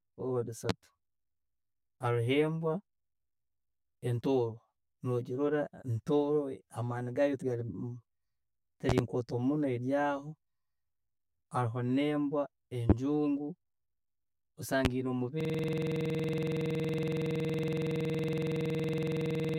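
Throughout the recording one channel runs roughly 10 ms behind the other, and when the two are folded to mono this channel delay causes comb filtering. Everything common to both channels cancels at evenly spaced frequencies, with the first notch around 50 Hz and further notches repeating up the spectrum. The speech sounds hollow and phasey, with a fixed coloration that never changes as the talker moves through different sounds.

Sudden voltage steps, likely from a switch, static discharge or a driver glitch, land on top of the speech four times. The first is at 0.69 to 0.72 s, a sharp loud pop about 25 dB above the speech. At 8.89 to 9.01 s there are two pops in quick succession, each about 20 dB up. Single pops of about 25 dB follow at 12.90 to 12.93 s and 14.85 to 14.88 s. Each sounds like a hard click or thump, and the speech carries on underneath without interruption.

At 15.41 s the system hangs while the audio hardware keeps cycling through its ring buffer. 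A single 46.44 ms slice of sound, which fits a 2048-sample buffer, repeats about 90 times until the clip ends. This system hang loop runs at about 21.5 Hz, which is just too slow to fuse into a pitch. It is heard as a rapid, rattling machine-gun stutter that replaces the speech entirely for the last four seconds or so.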